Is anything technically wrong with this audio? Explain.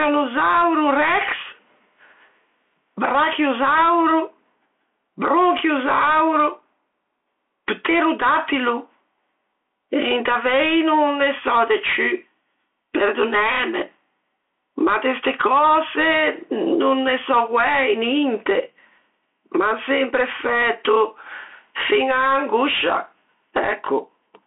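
Yes. Two faults run through the whole speech clip.

Gain pumping: the level is pulled down by around 15 dB under each loud syllable, squashing loud and soft together. This likely comes from gain set far too high with a fast limiter pulling it back.

Bluetooth CVSD headset codec: the sound sits in a 300 Hz to 3.4 kHz telephone band, with nothing above 3.8 kHz, which fits a 64 kbps CVSD link. Its one-bit adaptive step lags loud high sounds, so sibilants turn scratchy over a granular hiss. Simple band-limiting would not add this grit.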